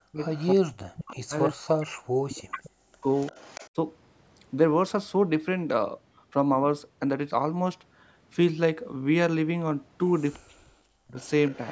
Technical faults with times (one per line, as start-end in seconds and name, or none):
0.00-3.08 speech suppressed in double talk
0.21-1.14 echo leak
2.51-3.70 echo leak
10.38-11.20 speech suppressed in double talk
11.20-11.72 echo leak